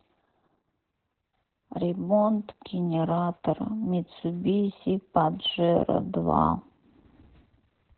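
Speech clip with Opus voice compression throughout: nothing above 4.2 kHz, heavy muffled, hoarse, slightly robotic coding that points to SILK narrowband mode at roughly 8 kbps.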